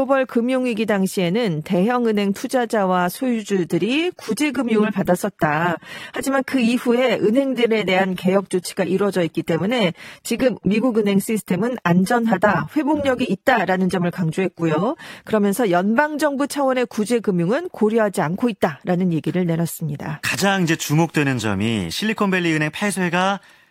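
From 3.14 s to 15.14 s the speech switches abruptly to an adaptive stream at a lower bitrate: codec artefacts rise, which fits a step down from about 96 to 32 kbit/s AAC. Unlike a dropout, there is no gap, and quality snaps back at the end.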